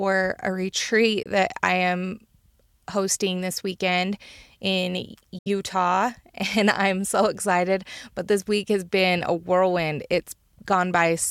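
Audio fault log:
1.23–1.27 s and 5.38–5.48 s, Bluetooth dropout: the sound cuts to silence, first for about 23 ms right after "a retreat" and before "that I am", then for about 70 ms right after "hosting this weekend in". When it returns, it picks up further along, as though it had kept playing through the gap. The likely cause is audio packets reaching the headphones too late and being discarded, one packet's worth in the first gap and three in the second.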